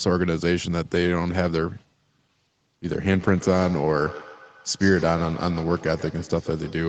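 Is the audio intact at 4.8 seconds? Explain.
No, feedback echo between two devices runs from 3.04 s to the end. Sound from one device loops back through the other's microphone, repeating roughly every 150 ms at up to about -15 dB, showing as faint stacked copies on a spectrogram.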